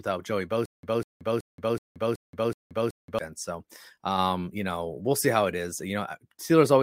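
From about 0.66 s to 3.19 s the speech turns into a stutter with silent gaps. A burst of roughly 198 ms plays, then about 177 ms of dead digital silence, and the same burst comes back seven times on a steady 375 ms cycle. It's most likely a stalled player or stream replaying its last fragment on each retry and then running dry. Whatever should have played during that stretch is simply gone.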